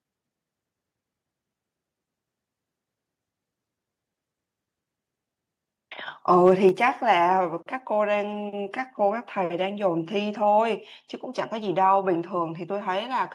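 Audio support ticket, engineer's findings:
Microphone overload, 6.45–6.51 s: input gain likely set too high, peaks driving the ADC about 2 dB past full scale. A few percent of samples flattened at the ceiling; tops shaved off, harsh crackle on the loudest syllable.

Microphone volume stepped down, 6.69 s: likely the client's automatic gain control reacting to the clipping and cutting device input in one step. Sudden level drop of about 4 dB, speech and background together, right after the distorted peak.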